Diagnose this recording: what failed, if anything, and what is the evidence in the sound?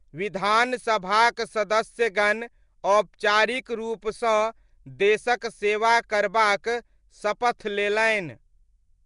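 Codec stage: throughout, the speech has a hissy, smeared, underwater quality and nothing above 10.6 kHz, likely Nellymoser compression filling unallocated bands with noise.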